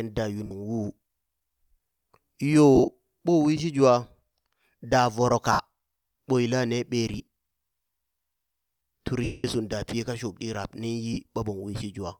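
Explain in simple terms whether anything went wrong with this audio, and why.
Lost LE Audio frames break up the speech at 0.46, 2.75 to 2.90, 5.52 to 5.60, 7.18 to 7.23, 9.24 to 9.44 and 11.13 s. The wireless link dropped small chunks of sound, and the decoder covered each gap by replaying the last bit it had, scrambled. That fill-in sounds like a brief noisy smear, and it is patchy at 2.75 s and 7.18 s, where the losses came in scattered bursts. The longest gap, at 9.24 s, lasts about a fifth of a second and fades toward silence.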